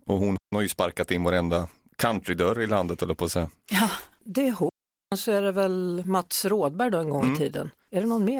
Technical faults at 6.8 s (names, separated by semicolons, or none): none